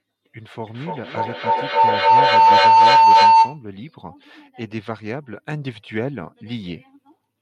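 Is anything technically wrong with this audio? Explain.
Yes. Feedback howl runs from 0.67 to 3.68 s. Speech re-enters the microphone through the loudspeaker and gains level on each loop, building a tone around 1 kHz, about 17 dB above the speech, with repeats roughly every 300 ms.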